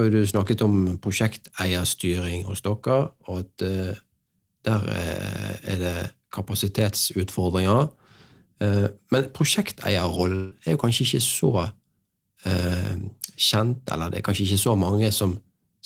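A long network dropout from 10.35 to 10.53 s breaks into this speech recording. About 160 ms of audio never reaches the listener. Instead of a hard gap, the last sound is stretched into a fading buzz that covers nearly the whole hole, around 158 ms, so the level never drops to true silence. Speech then resumes at "er jo kanskje" with the lost portion simply gone. The likely cause is a burst of lost packets on the network connection.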